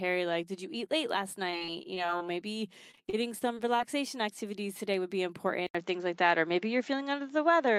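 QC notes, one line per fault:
1.47–2.22 s and 2.91–3.81 s: repeated packet loss (robotic sound). Each stretch has eight short holes, the longest about 24 ms in the first and 32 ms in the second. Each hole is bridged by stretching the preceding sound, so about 18% of each stretch is patched material. This gives choppy sound with pieces missing that comes and goes in bursts, rather than one clean dropout or a steady coloration, and normal sound returns between the two runs.
5.67 s to end: input switched to a poorer device. An 80 ms silence marks the switch. After it, the band stops at 7.5 kHz, the level shifts by around 5 dB, and a new noise floor sits roughly 35 dB below the signal. The likely cause is the recording moving to a different microphone or a headset call profile. Unlike the packet-loss bursts, this is one lasting change in tone and background that continues to the end of the clip, not intermittent choppiness.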